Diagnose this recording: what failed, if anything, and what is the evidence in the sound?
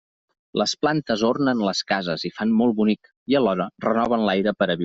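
No fault found in this recording.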